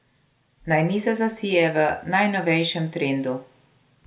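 No technical faults can be heard anywhere in the recording; the speech signal stays steady and intact for its whole duration.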